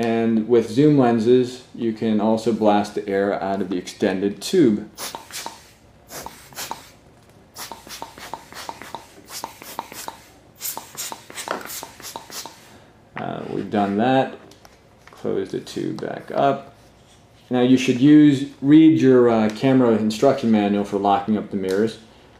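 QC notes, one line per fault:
No fault found.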